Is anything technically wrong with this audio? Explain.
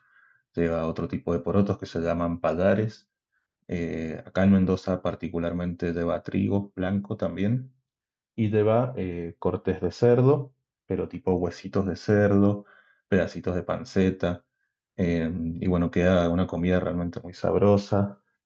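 No, nothing technically wrong can be heard in this speech clip. It has passed through a WebRTC call path that is working normally, with the top end rolled off above 8 kHz and a light coding texture that fits Opus at around 64 kbps.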